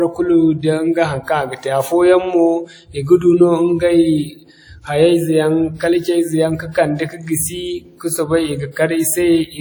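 Across the whole of the speech, from start to finish, there is a ringing, washy quality, with a hiss that rises and falls along with the sound rather than sitting steady underneath it. The top end still extends to about 20.1 kHz. This is likely WMA compression, whose transform blocks smear quantisation noise over tens of milliseconds and drop weaker detail. The plainly audible damage fits a bitrate around 48 kbps.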